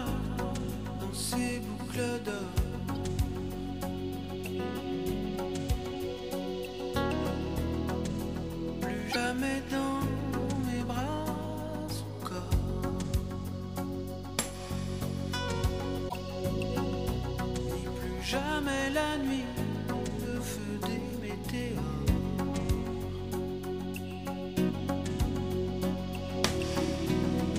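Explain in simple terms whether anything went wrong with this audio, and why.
Three brief glitches interrupt the audio: a tiny blip at 2.95 s, then two slightly longer ones from 9.08 to 9.16 s and from 16.05 to 16.14 s. This is damaged data in a compressed stream. Some bytes of the compressed file were wrong, so the player couldn't decode those moments properly. It lost its place and jumped ahead to the next piece it could read.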